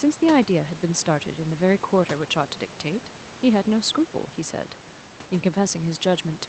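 No faults heard in the speech; room noise sits about 21 dB below it, and the call path's codec tops out at 8 kHz with a coding texture that fits Opus at around 24 kbps.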